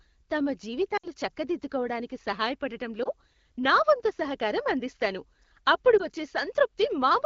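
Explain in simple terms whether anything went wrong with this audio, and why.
Three short gaps come from lost AMR speech frames. Radio errors corrupted pieces of the call, so the phone's decoder guessed the missing sound by repeating the last good sound more quietly. At 0.97 to 1.05 s the speech drops to near silence briefly, about three frames' worth. At 3.03 to 3.09 s, just before "నా వంతు సహకారం అందిస్తాను", and at 5.97 to 6.05 s, just after "వంతు సహకారం అందిస్తాను అప్పుడు", there are brief dips.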